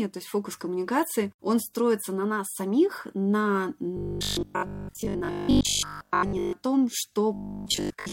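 From 3.97 to 6.53 s, after "на нас самих на", and again from 7.34 s to the end, the speech turns into a rigid metallic buzz at 50 Hz, the robotic sound from repeated short buffers. A roughly 20 ms block is likely being replayed while most of the new audio is skipped.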